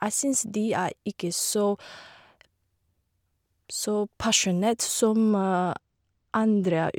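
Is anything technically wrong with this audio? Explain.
Yes. From about 5.30 s to the end of the speech, there is channel delay causing comb filtering. One channel arrives a couple of samples late, a few hundredths of a millisecond, and the two are summed to mono. Content common to both channels then cancels at evenly spaced frequencies, with the first notch sitting high, around 10 kHz. The result is a dull top end, with the upper treble thinned by that fixed notch.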